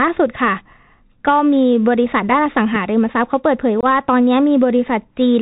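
From start to finish the speech carries the sound of the Bluetooth CVSD headset codec, which fits a 64 kbit/s link. Nothing above 4 kHz survives, s sounds turn scratchy, and a granular hiss sits beneath everything. That grainy, slope-limited roughness sets it apart from ordinary low-pass band-limiting.

At 3.81 to 3.85 s comes an unconcealed Bluetooth headset packet loss: a few packets, about 22.5 ms of audio, never arrived and were replaced by silence or an idle pattern. The hole has hard edges, and the speech returns briefly quieter, unlike a smoothed concealment gap.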